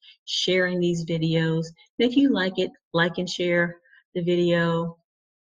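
No technical fault can be heard at any point; the signal stays steady and intact throughout.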